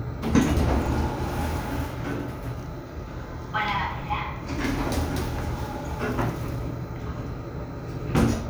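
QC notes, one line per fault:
0.82–0.88 s, chunks out of order: a 20 ms chunk plays two chunks late, briefly jumbling the sound, with three hard joins.
4.00–4.04 s, chunks out of order: two adjacent 20 ms chunks play swapped, one chunk late, giving a brief garbled moment with hard joins.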